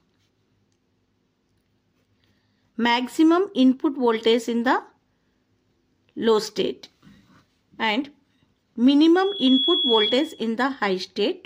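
At 9.15 s a loudspeaker feedback squeal starts: a microphone is picking up the speaker it drives, and the loop gain exceeds unity at 3.4 kHz. The tone swells over roughly 0.4 s to about the level of the surrounding sound, then stops at 10.49 s.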